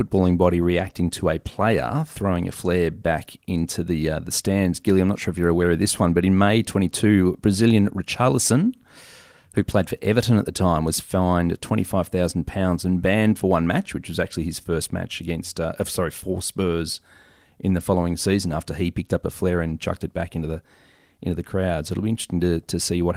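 Speech with no technical faults found; the Opus voice coding leaves only a light codec texture across a full-band signal, which fits a hybrid-mode stream at about 24 kbps.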